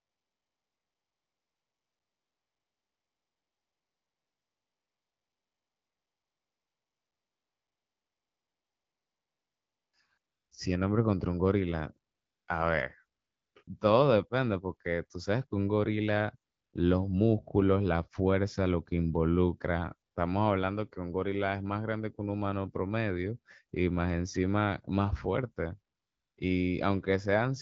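AMR comfort noise fills 0.0–9.93 s, then 10.17–10.51, 12.11–12.47, 13.19–13.55, 13.63–13.67, 16.51–16.73, 20.11–20.15 and 25.95–26.37 s. The phone stopped sending speech frames, and the receiver substituted smooth synthetic hiss. Unlike a dropout, these gaps aren't silent: steady noise switches in and replaces the real background.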